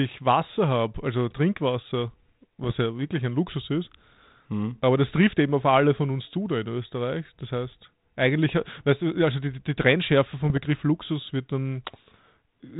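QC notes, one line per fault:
2.64 to 2.75 s and 10.40 to 10.58 s, bit errors on an ADPCM link: pops and rough bursts with brief level jumps, the first, just before "ja wirklich ein", denser than the second. Each flipped bit throws the decoder's step size and predictor off, so the damage rings on for milliseconds.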